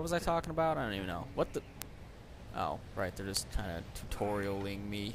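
Four bit error spikes occur, at 0.44, 1.82, 3.37 and 4.43 s. Each is a flipped bit that throws one sample, or three at 0.44 s, far off value before it returns. This gives an isolated broadband tick unrelated to the sound, peaking around -21, -9, -9 and -27 dBFS.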